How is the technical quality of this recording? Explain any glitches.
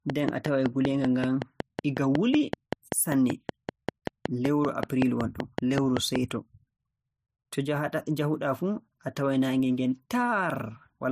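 The recording has one clear fault, confined to roughly its first six seconds. From 0.10 to 6.17 s a train of clicks runs through the speech: about thirty sharp pulses of much the same shape at a regular 5.3 per second, peaking roughly 15 dB above the speech. They are heard as steady ticking, including in pauses. The likely cause is interference from nearby equipment or a faulty connection or power supply injecting a repeated pulse. On a spectrogram they appear as evenly spaced thin vertical lines spanning all frequencies, and the waveform shows matching narrow spikes.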